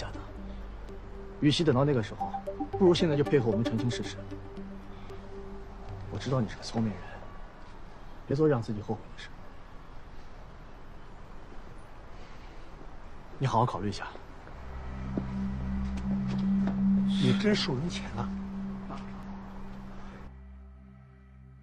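Three short bursts of damaged data in the compressed stream interrupt the audio, at 0.33 to 0.39 s, 8.27 to 8.33 s and 19.23 to 19.28 s, each lasting roughly 50 to 60 ms. At each point the encoded bytes reaching the decoder are corrupt, so it cannot decode the affected frames correctly, drops sync and has to find the next valid frame header before normal playback resumes. Each event is a brief chirp or blip.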